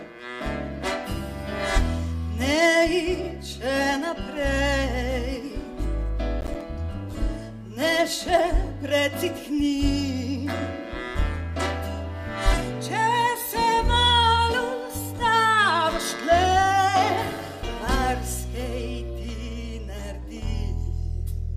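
Processor overload crackle runs from 6.41 to 6.61 s, a burst of gritty tearing laid over the audio for about a fifth of a second before it clears. The processor was falling behind on its short audio buffers, each around 10 ms, and about five deadlines were missed in that stretch. Every miss left a brief hard-edged dropout to silence, and these closely spaced gaps fuse into the crackle instead of sounding like separate clicks.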